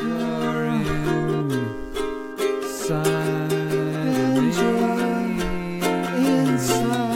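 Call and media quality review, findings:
Computer activity noise, whole music clip. Faint buzz under the music, roughly 40 dB below it, pulsing at around 150 per second. Comes and goes independently of the music. Probable component: analogue audio path sharing ground with the host computer. Mechanism: processor, graphics or mouse load currents shift the common ground, and that ripple lands on the signal. Check grounding, shielding, or isolate the interface.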